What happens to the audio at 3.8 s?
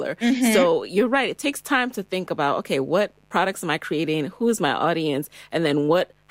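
At 3.8 s the speech sits over mains buzz, which runs through the whole clip at roughly 40 dB below the speech. Sharp switching spikes, likely from a dimmer, rectifier or missing shield, leak in twice per 50 Hz cycle, spreading harmonics of 50 Hz up to several kHz and giving a steady, raspy buzz. A spectrogram shows evenly spaced horizontal lines at multiples of 50 Hz; in pauses the waveform shows spikes every 10 ms.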